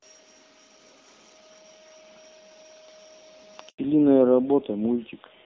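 At 3.69 s a handover gap silences the speech for 100 ms as the call switches networks, showing as a flat, empty stretch in the waveform until 3.79 s. From 3.79 s the call falls back to narrowband, and the HD Voice sound, clear until then, becomes duller and rougher. The spectrogram shows nothing above 4 kHz, which fits a switch to a low-rate AMR narrowband mode.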